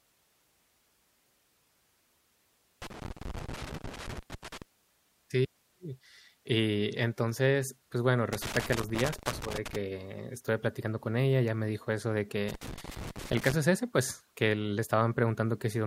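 A worn or dirty contact somewhere in the signal path keeps making and breaking as the cable or plug shifts, so this speech recording carries loose connector crackle: the signal is chopped into irregular bursts of crackle and scratching. It strikes three times, from 2.82 to 4.62 s, from 8.33 to 9.76 s between "y entonces pues bueno" and "estuve platicando con ella", and from 12.49 to 13.53 s between "me dijo eso de" and "es ese pues que".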